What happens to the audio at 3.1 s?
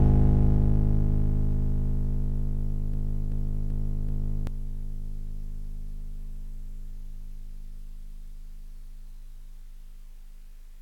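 At 3.1 s the music is caught in a broken-record loop that runs from 2.94 s to 4.47 s. A fragment of about 0.38 s plays four times back to back, each repeat identical, so the passage stutters in place instead of moving forward. The likely cause is a stall in the player, encoder or stream, with the last held fragment sent again and again. Whatever music belonged in that span is lost.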